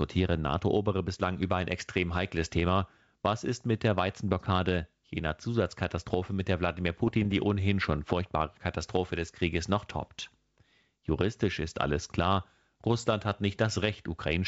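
Bit errors on an ADPCM link, 7.04 to 7.32 s, before "die ohnehin schon furchtbare": flipped bits upset the decoder's step size and predictor, giving pops and rough, level-jumping bursts.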